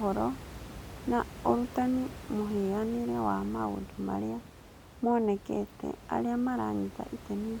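Nothing is technically wrong with this speech clip.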